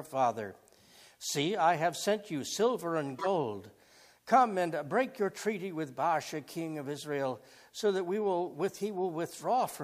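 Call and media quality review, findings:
Corrupt frame decoded, 3.16–3.27 s: short glitch, peak about -20 dBFS, spanning roughly two frames; decoder played damaged bits as misplaced energy, not the silence or smoothed fill of concealment.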